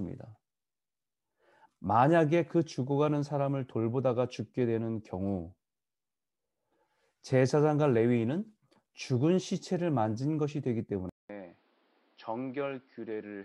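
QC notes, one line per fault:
11.09–13.45 s, input switched to a poorer device: after a 200 ms gap the speech goes duller and boxier, with nothing above 5.6 kHz, drops a few dB in level and picks up a new, faint noise floor. That's likely a swap to a narrower-band mic or headset.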